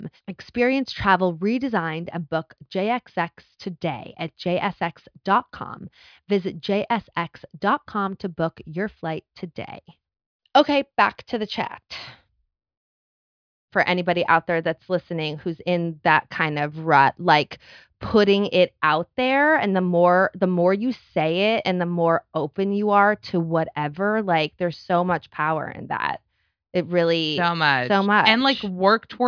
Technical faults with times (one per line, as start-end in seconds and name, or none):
none